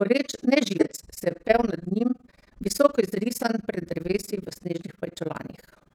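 From the start, the speech carries overlap-add ripple. Windowed frames were rejoined with an overlap that does not sum to a steady gain. The level swings by about 60 dB around 20 times a second. It sounds like a fast, rough flutter.

At 0.79 to 0.86 s, damaged data in a compressed stream produces a short glitch. The same happens at 4.74 to 4.80 s, just after "izrisan pred drevesi v". Each time, corrupt frames threw the decoder out of sync. It then hunted for the next frame header, leaving a brief blip.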